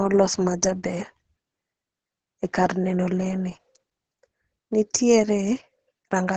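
From start to finish the speech carries Opus voice compression, heavily applied. The sound has nothing above about 8 kHz, consistent with a wideband SILK mode whose linear-prediction coder models the vocal tract and codes the excitation coarsely, which points to a bitrate around 10 kbps. The speech comes across muffled, hoarse and faintly robotic, with a dull top end and a rough, buzzy texture in place of natural breathiness.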